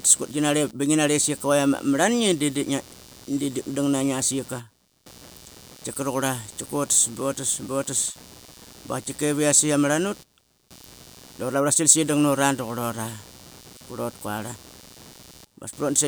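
Computer activity noise runs throughout: a buzzy chirping near 150 Hz, about 25 dB below the speech, from shifting ground currents, seen as faint harmonic bands on a spectrogram.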